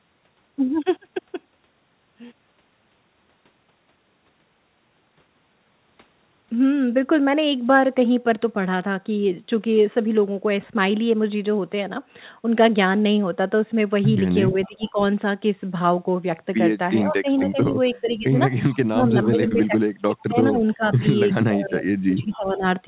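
From 14.51 to 14.98 s the speech dips by about 20 dB, and at 14.63 to 14.9 s a faint delayed copy of a voice trails 447 ms behind, about 25 dB below the speech. The dip is likely speech suppressed in double talk: with both ends talking, the echo canceller couldn't separate the near talker from loudspeaker echo and turned everything down. The trailing copy is echo leak, likely residue the far end's canceller failed to remove and sent back.

The same pattern returns from 17.04 to 18.28 s, with drops of about 15 dB and echo at 17.38 to 17.96 s. Echo appears again at 18.75 to 19.67 s, overlapping the longest suppression, 18.89 to 22.64 s, where the speech falls as much as about 25 dB. A brief echo scrap follows at 22.33 to 22.38 s. All of this sits within the narrow call band, which stops at 4 kHz.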